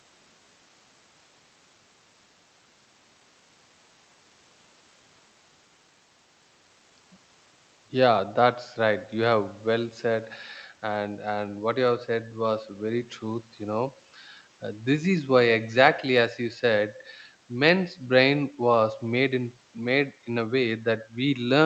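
Nothing stood out on listening to this speech clip, which fades in smoothly over its first 3.6 s and carries the band-limited sound expected of a call connection.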